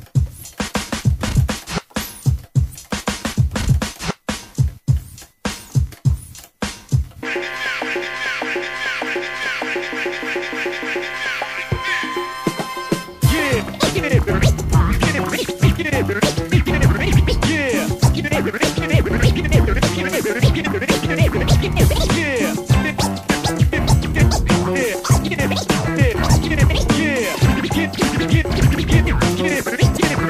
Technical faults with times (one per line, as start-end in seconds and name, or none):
2.71-2.75 damaged data in a compressed stream
20.63-20.67 damaged data in a compressed stream
27.31-27.36 damaged data in a compressed stream
29.95-30.00 damaged data in a compressed stream